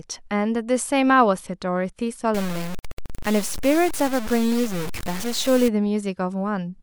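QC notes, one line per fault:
2.35–5.68 s, low bit depth without dither: the speech was likely truncated to 5 bits without dither, leaving grainy distortion that follows the speech, only about 10 dB below it.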